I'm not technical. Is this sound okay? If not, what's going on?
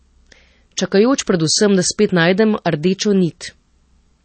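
No. MP3 compression damage runs through the whole recording, from start to finish. The speech sounds dull and watery, because nothing above about 8.4 kHz survives, so the crisp edges of s sounds are gone. This is likely the result of saving the file as a small MP3. To fit it into so little space, the encoder threw away the treble and the quiet detail it judged unimportant, and that leaves a plainly swirly, muffled quality.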